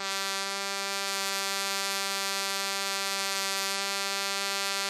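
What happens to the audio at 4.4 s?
At 4.4 s the music, like the rest of the clip, has nothing above 15.2 kHz and carries smeared, watery low-bitrate artefacts. This is likely low-bitrate audio saved at a high bitrate: an earlier lossy encode already discarded that detail, and the later high-rate MP3 re-encode cannot restore it. On a spectrogram, a flat ceiling at 15.2 kHz runs the whole length of the clip.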